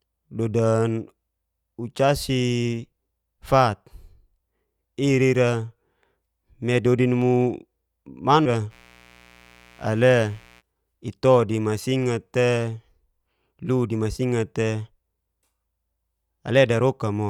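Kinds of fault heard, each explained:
Stream segment skipped: From 8.45 to 8.49 s the speech lurches forward with a small blip, likely because one segment of the stream failed to load and playback moved on to the next. The waveform shows an abrupt splice discontinuity, and the spectrogram a thin vertical broadband line.
Mains buzz: From 8.69 to 10.63 s, ending just before "ito di masingat te", a steady, raspy buzz sits about 30 dB below the speech. Sharp switching spikes locked to the 60 Hz mains draw evenly spaced horizontal lines at 60 Hz multiples on a spectrogram.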